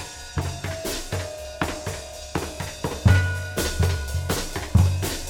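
From the first moment to the last, the music carries a rough, metallic edge, most noticeable on the brighter, higher parts of the sound. This is periodic clock jitter: interference is wobbling the converter's sampling clock at a steady rate of around 1 kHz. Each sample is taken slightly early or late in that rhythm, so every component of the music gains extra tones offset by about 1 kHz on either side, giving the grainy, clangy coating.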